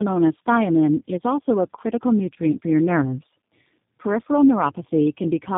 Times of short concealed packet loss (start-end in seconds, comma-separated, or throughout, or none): none